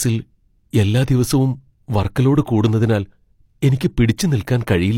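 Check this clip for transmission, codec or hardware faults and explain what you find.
One codec fault is present: a pre-echo at about 1.07 s, just before "ദിവസവും വർക്ക് ലോഡ് കൂടുന്നതിനാൽ". A hiss of about 10 ms arrives ahead of the onset. The codec codes audio in blocks and spreads its quantisation noise across each one. Here a sharp attack sits late in its block. Noise sized for that loud attack leaks into the quiet moment before it. The onset therefore sounds softened and smeared.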